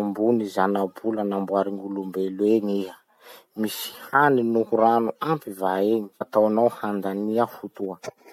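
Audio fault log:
6.20 s, stream segment skipped: the speech jumps forward abruptly, with a small blip at the join, as if a stretch of the recording had dropped out. The likely cause is a segmented stream in which one segment failed to load, so the player moved straight on to the next one. The missing audio is never heard, and the splice between unrelated points produces the brief click.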